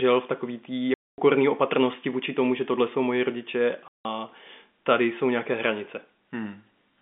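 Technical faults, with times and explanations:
0.94–1.18 s and 3.88–4.05 s: packet loss filled with silence. Hard-edged 240 ms and 170 ms gaps, likely from whole 10 ms packets replaced with silence.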